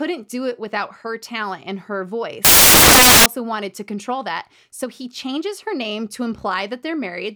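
From 2.45 to 3.26 s, right after "her talent and her", the samples are built from the wrong bytes: misassembled values turn the fast-changing low bits into loud, harsh noise. Unlike steady hiss, this noise is close to white on louder speech, clearing by "wanted to control that".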